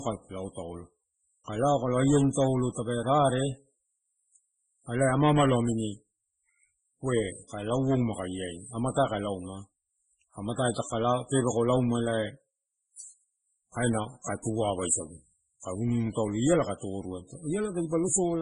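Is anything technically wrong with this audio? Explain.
Yes, three kinds of fault can be heard in this speech clip.

Filter restarted on every block: throughout, a buzz at 50 Hz rides on the speech. A filter loses its memory at each block boundary and starts again from silence, so every block opens with a small transient, and these repeat 50 times a second. Unlike mains hum, the buzz rises and falls with the speech level and disappears in pauses, because the transients are only as large as the signal being filtered.

Throughout, the audio also shows heavy codec damage. The sound is watery and swirling, attacks are smeared, and nothing is present above 10 kHz. This pattern is likely MP3 compression at a very low bitrate, around 16 kbps. Short of bits, the encoder drops weak frequency lines that flicker on and off between frames and cuts the treble at a fixed point. A plain low-pass filter would dull the sound without adding this swirling.

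Pre-echo: at 14.22 to 14.25 s, spread over 37 ms, and at 14.42 to 14.45 s, spread over 23 ms, just after "kaina kae". A transform codec spreads quantisation noise evenly across a block, so noise scaled for a loud attack also fills the quiet moment before it. Each attack is preceded by a short hiss and sounds softened. A click would instead sit on or after the attack.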